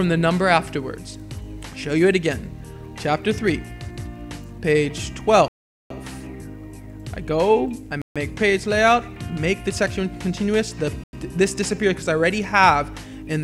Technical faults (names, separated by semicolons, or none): Bluetooth stall